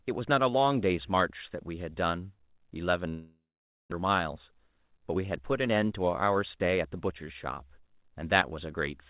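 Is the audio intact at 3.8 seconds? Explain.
No. A long network dropout runs from 3.08 to 3.94 s, and 3.8 s falls inside it. Audio likely stopped arriving, so the receiver stretched the last sound into a fading buzz and then left about 0.51 s of silence, which is where 3.8 s sits. When sound resumes, roughly 0.6 s of the original is simply gone, and the timing afterwards is shifted by around a fifth of a second.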